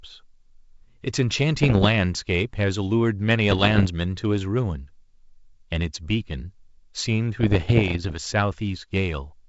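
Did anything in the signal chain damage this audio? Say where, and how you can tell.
Yes. Bit errors on an ADPCM link, carrying what sounds like 64 kbit/s G.722 speech, cause pops and rough, gritty bursts with brief jumps in level at 1.60–1.89 s, 3.50–3.87 s and, longest, 7.41–8.16 s. Each flipped bit corrupts the decoder's step size and predictor, so the damage rings on for milliseconds instead of clicking once. On a spectrogram these show as broadband vertical smears, and on the waveform as jagged spikes and amplitude steps.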